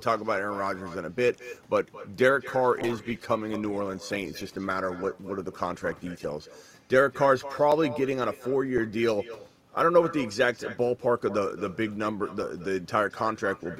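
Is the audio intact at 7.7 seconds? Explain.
No. At 7.72 s there is an underrun with held sample. The output buffer ran dry for about 2.3 ms, and the converter froze on its last value, leaving a brief flat step in the waveform. Roughly 2 ms of live audio was skipped. The echo with no canceller also continues through this point. A copy of the speech, about 16 dB down and thinner, trails each phrase by around a fifth of a second, because nothing removes the far end's loudspeaker pickup.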